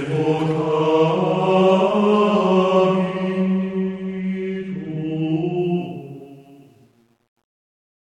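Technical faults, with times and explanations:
5.58 to 8.04 s, truncation distortion on a fade: the fade-out turns gritty, worst from 6.31 s to the end. The fade kept too few bits and added no dither, which fits 10-bit resolution, so the quiet waveform collapses into coarse square steps.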